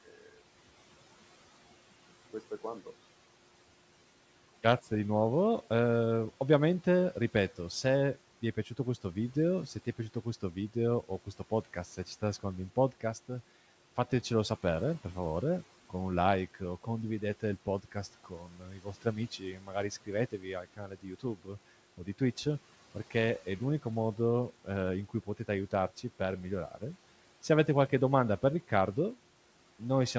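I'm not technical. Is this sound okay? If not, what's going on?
No, not quite. Between 18.24 and 19.18, again from 19.39 to 19.74, and from 20.32 to 21.49 seconds, there's speech cut by the noise suppressor: the call's noise filter mistook bits of speech for background noise and turned them down, so they sound swallowed and faint.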